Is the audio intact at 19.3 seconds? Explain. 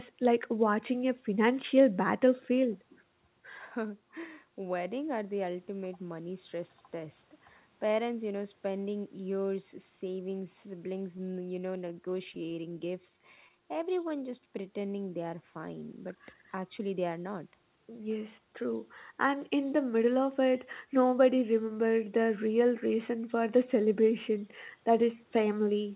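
No. From 19.12 to 19.51 s a jitter buffer speed-up is under way. The receiver's buffer had built up more audio than it targets, so it trimmed short slices of one or a few pitch periods in quick succession, dropping around 40 ms and running the sound at about 109% speed. It sounds briefly hurried, yet the pitch stays put. That sets it apart from a resampling speed-up, which would raise the pitch, and from packet-loss concealment, which fills gaps with smeared repeats.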